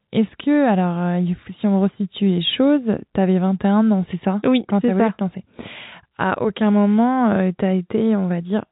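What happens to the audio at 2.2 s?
Nothing goes wrong at 2.2 s: the speech carries on intact through that moment, with only the narrow, telephone-style band of G.711 A-law coding, where nothing above about 3.9 kHz comes through.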